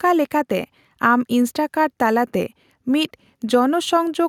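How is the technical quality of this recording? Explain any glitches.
No audible glitches or faults.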